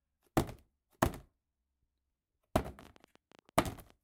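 From 2.68 s to 3.91 s a train of clicks runs over the sound. About fifteen similar pulses arrive at roughly 13 per second, unevenly spaced, and they are about as loud as the sound itself. They are heard as an irregular ticking. Interference or a faulty connection or power supply is the likely cause.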